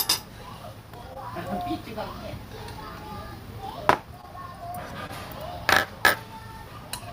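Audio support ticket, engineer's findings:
Brief smears at 1.13–1.17 s, 4.21–4.25 s, 5.07–5.11 s. Short concealed packet loss, receiver-side jitter buffer/decoder concealment. About 20 ms of audio missing each time, which fits one lost 20 ms packet. Decoder bridged the gap by extending the preceding sound for roughly 17–19 ms, then cross-faded back into real audio. Result: momentary wobble at each join.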